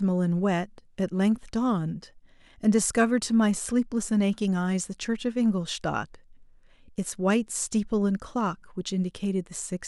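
Listening closely to this speech recording, nothing stood out as a technical problem at any point.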